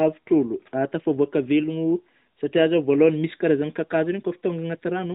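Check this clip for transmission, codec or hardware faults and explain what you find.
No transmission, codec or hardware faults turn up in the clip.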